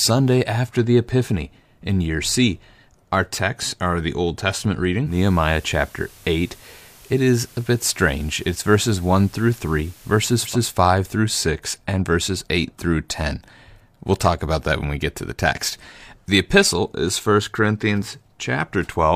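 Speech, with a digital radio blending to analogue fault from 5.04 s to 10.58 s. The receiver loses the digital stream and cross-fades over 155 ms to the station's FM broadcast, bringing up hiss some 30 dB below the signal at unchanged level, then fades back.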